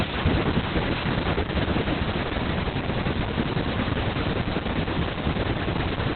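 The speech sounds muffled, hoarse and faintly robotic from start to finish, with nothing above about 4.3 kHz. This is Opus voice compression in its SILK narrowband mode, where the linear-prediction coder describes the excitation coarsely. The heavy damage fits a very low rate around 8 kbps.

From 0.15 s to 6.09 s, sharp ticks of uneven strength arrive steadily, roughly ten per second. These are word clock ticks: the receiving device runs on its own clock, drifting by something like 300 ppm, and each time the clocks slip a single sample is dropped or repeated.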